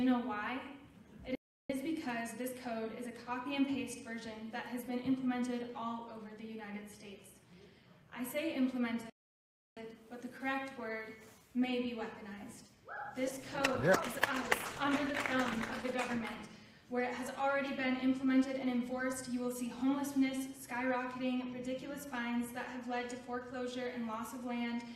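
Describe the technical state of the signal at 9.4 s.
At 9.4 s the output is in a playback stall: the sound stops in mid-flow at 9.10 s and the signal stays silent until 9.77 s, a gap of about 0.67 s, before audio resumes. The cut is abrupt rather than faded, and the silence is complete for its full length. The likely cause is the player running out of buffered data, or its playback thread being blocked, so that no samples reached the output until it recovered.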